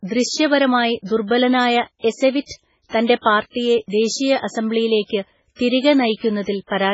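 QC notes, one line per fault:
Throughout: MP3 compression, likely the cause of the watery, swirling quality across the whole speech clip. Nothing reaches above 7.6 kHz, so the treble is cut flat at that point, and sibilants come out as dull, metallic chirps. Weak spectral detail flickers on and off between frames, and attacks smear. The damage is heavy and fits a very low bitrate of around 16 kbps. On a spectrogram there is a hard ceiling at 7.6 kHz, with patchy, blocky holes below it.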